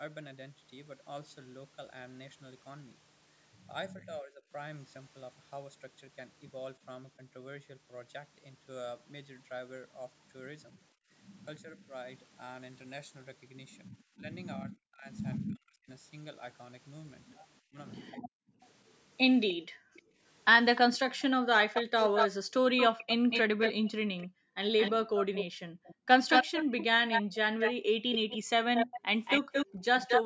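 At 3.97 to 4.52 s the speech dips by about 15 dB. This is speech suppressed in double talk. The likely cause is an echo canceller that heard both sides at once. It could not tell its own talker from the loudspeaker echo. So it turned everything down. The same happens from 10.72 to 11.93 s, at about 25 dB. From 13.9 to 15.89 s the dip is deeper, at about 40 dB, over roughly a second and a half. The longest stretch runs from 17.61 to 29.84 s. There the speech drops out in pieces, for about seven seconds in total.

Within that stretch, at 18.63 to 20.8 s, a faint echo leak appears. A delayed copy of the speech returns about 304 ms late, at about 15 dB below the speech. From 21.74 to 30.23 s a stronger echo follows, about 223 ms late and only about 5 dB down. It sounds like a second, lagging voice.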